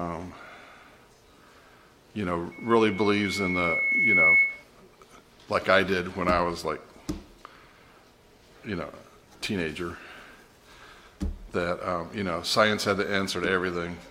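A single piercing tone near 2.2 kHz swells over roughly two seconds from 2.51 s to 4.64 s, reaching about 10 dB above the sound: loudspeaker feedback squeal, where the microphone re-amplifies its own loudspeaker output.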